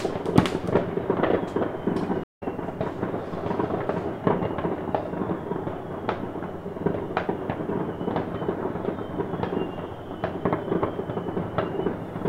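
At 2.24 s there's a stream reconnect: the connection dropped, playback went silent for about 139 ms, then a fresh decoder picked up mid-stream. By 2.43 s the sound is back, but it's skipped ahead, roughly 150 ms of material simply missing at the join.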